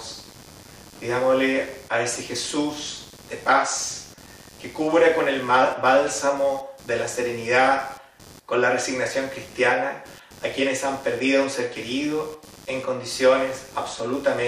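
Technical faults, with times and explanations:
Throughout: computer activity noise. A buzzing, chirping layer pulsing at roughly 100 times per second sits about 25 dB below the sound. It tracks the machine's workload, not the audio, because changing load currents disturb the ground that the audio circuitry shares.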